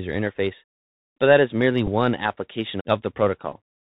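Throughout, the audio passes through the Bluetooth CVSD headset codec. Its one-bit up/down coding with an adaptive step limits everything to below 4 kHz, a band that fits a 64 kbps CVSD link. The damage is plainly audible: s sounds turn scratchy, loud bright sounds distort, and a granular hiss sits under the speech.

From 1.87 to 1.89 s, just after "but that is merely", the headset lost voice packets and the chip decoded the previous packet's bits again. About 7.5 ms went missing, which fits two 3.75 ms packets. The result is a brief buzzy stutter.

At 3.52 s the same Bluetooth headset packet repeat happens again. Roughly 7.5 ms is replaced by a repeat of the last good packet's data, which points to two lost packets. It is heard as a quick tick-like roughness.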